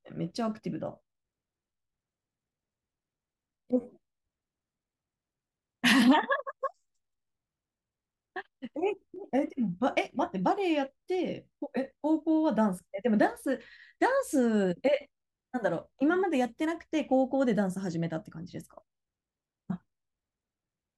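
Speech with three repeated-buffer faults, at 3.81–3.84 s, 6.81–6.83 s and 9.16 s, where the playback device ran short of fresh audio and replayed its last block. Each repeated slice lasts about 10.7 ms, which fits a 512-sample buffer, so the events come across as brief buzzy stutters or clicks, longest at 3.81 s. A waveform shows an identical short segment tiled back to back with abrupt steps at each join; a spectrogram shows a frozen vertical slice edged by thin broadband lines.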